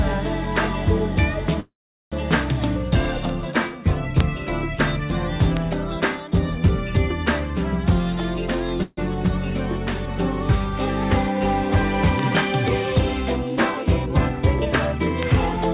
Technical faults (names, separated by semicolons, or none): bit error spike; call audio freeze; jitter buffer speed-up